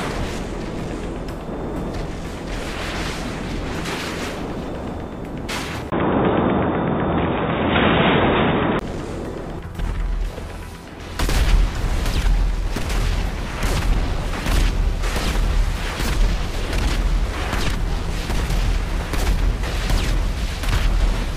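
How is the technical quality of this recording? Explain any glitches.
The recording has one glitch, a stretch between 5.9 and 8.81 s. After a 20 ms gap the sound turns duller, with nothing above 3.8 kHz, a level shift of about 5 dB and a new low noise floor. The likely cause is an input switched to a poorer device, another microphone or headset profile with narrower bandwidth and its own noise.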